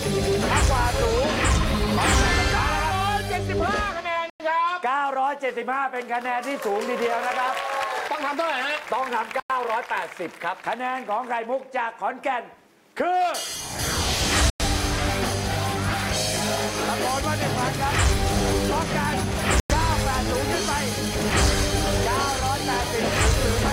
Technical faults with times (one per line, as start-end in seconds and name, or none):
4.30-4.40 gap between chunks
9.40-9.50 gap between chunks
14.50-14.60 gap between chunks
19.60-19.70 gap between chunks